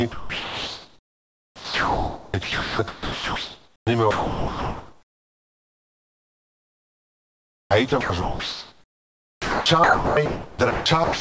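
From the very start, the speech has a hollow, phasey colour. That is channel delay (comb filtering). One channel runs late by roughly 10 ms, and when the two are summed to mono, the shared sound cancels at evenly spaced frequencies. The first notch sits low, around 40 Hz, and the rest repeat up the spectrum. The notches stay fixed for the whole clip, so the hollow colour never shifts.

From 0.03 s to the end at 11.2 s, the sound is chopped by the voice detector. The sender kept switching between sending and not sending. Quiet syllables and word edges drop out and are replaced by comfort noise. Nearly 10 s in total is filled this way. The speech sounds choppy, and the real room noise sits about 41 dB below the speech. The detector's switching is the likely cause.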